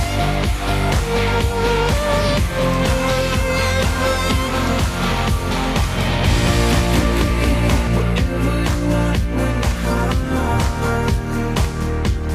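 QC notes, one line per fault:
6.25–7.87 s, doubled audio track: a second full-band copy of the sound trails the original by around 200 ms at about equal loudness, with no decay or room colour, switching on and off abruptly. Likely a second capture path or edit holding two out-of-step copies.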